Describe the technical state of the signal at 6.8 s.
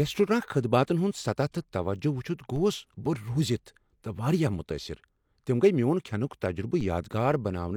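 At 6.81 s there's a DC step: the waveform's zero line suddenly jumps to a new offset, the kind of thing you get when a converter recalibrates or an input carrying an offset gets switched in. You hear it as a brief low thump or click right at that instant, while the speech itself carries on untouched. The offset doesn't hold; it drains away gradually, behaving like a high-pass around 5 Hz pulling it back to zero.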